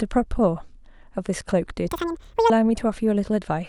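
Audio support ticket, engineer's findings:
Audio read two samples at a time (double speed), 1.88 to 2.50 s. Playback runs 2x fast, one octave up. Sample pairs are consumed as single frames.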